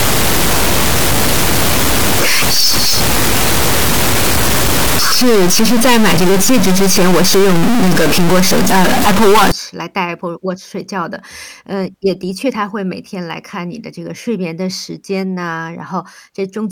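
A high-order sample bit in the converter or data line is likely stuck, so from 0 to 9.52 s about half the values in this speech recording jump by a large step, roughly -5 dBFS, giving harsh, buzzy distortion and loud noise filling the pauses.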